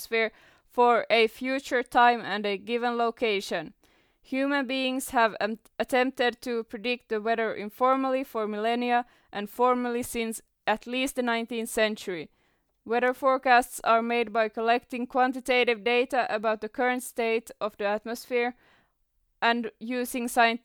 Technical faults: none

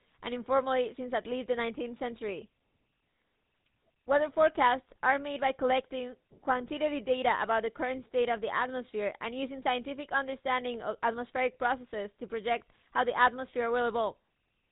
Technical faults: GSM full-rate codec

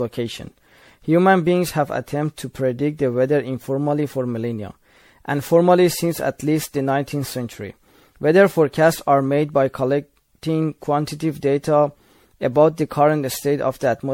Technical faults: generation loss

